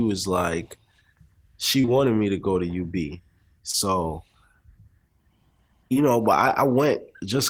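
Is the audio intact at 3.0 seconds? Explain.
Yes, at 3.0 seconds the speech plays through intact, with no dropout, click, distortion or other fault at that moment.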